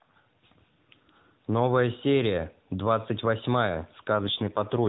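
Right near the end, from about 4.15 s to 4.89 s, there's an AMR rate drop. The AMR-NB mobile codec, which is carrying the speech with only light damage up to that point, gets pushed to a lower mode, and the roughness points to a step from 12.2 down to 5.9 kbps. The 4 kHz band stays put and there's no gap, but the voice goes buzzier and more synthetic because far fewer bits are left to describe it.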